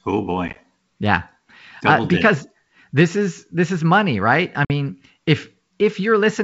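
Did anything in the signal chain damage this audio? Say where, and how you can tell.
Yes, packet loss on an ADPCM call, at the network stage. Silent gaps of 10 ms or less pepper 0.48 to 0.57 s, and a 50 ms hole follows "is money right I" at 4.65 s. Each loss desynchronises the decoder's predictor and step size, so the sound resumes briefly distorted.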